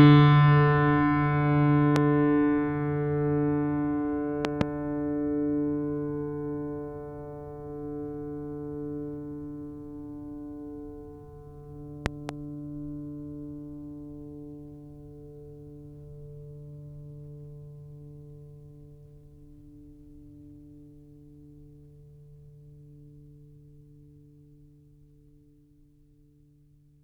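A loud pop hits the music at 1.96 to 1.98 s, then double pops at 4.45 to 4.63 s and 12.06 to 12.31 s, each jumping something like 20 dB above the mix. The music keeps going underneath. A likely cause is a voltage spike from a plug, switch or static.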